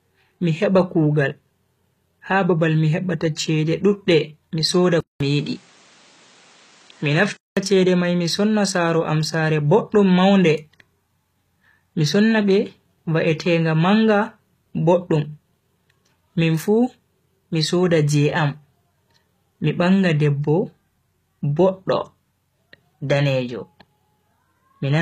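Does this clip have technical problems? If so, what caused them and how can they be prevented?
Yes, two things stand out.

All the way through there's HE-AAC compression, and it's plainly audible. Nothing comes through above 14.9 kHz, and the treble that's there sounds rebuilt: the encoder keeps the lower band and fakes the top by copying it upward under a coarse envelope, so s sounds come out gritty and a bit lispy. That likely points to a bitrate around 20 kbps. To prevent it, encode at a higher bitrate, or use a codec that actually codes the full band.

Then from 5.0 s to 7.57 s the input switched to a poorer device. There's a short gap of about 200 ms at the switch, then the sound goes duller, with nothing above 9.2 kHz, and a faint new background noise sits well underneath it. The loudness stays about the same, so it's the tone that gives it away. The likely cause is the system hopping to another mic or a headset profile mid-recording. 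To prevent it, pin the input device and turn off automatic device switching before you record.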